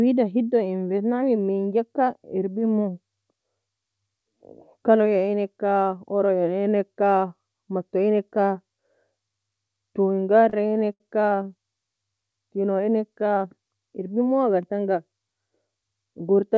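Speech passing through a WebRTC call path, with content ending at 8 kHz, consistent with a wideband codec such as G.722, breaks into repeated stalls (stutter) between 10.50 and 11.01 s. Packets arrived late or too slowly, so the jitter buffer ran dry five times, and the receiver stretched the last sound to bridge each gap. The longest bridge was about 70 ms. Roughly a quarter of that half-second is concealment, totalling 131 ms, yet no speech is lost; it just drags and hiccups. On a spectrogram the stalls appear as brief smeared, repeated harmonic bands where formant movement freezes. The waveform shows short looped-looking stretches, the longer ones tapering in level.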